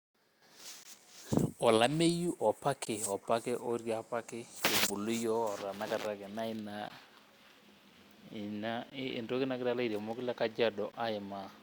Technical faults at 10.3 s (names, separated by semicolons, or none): none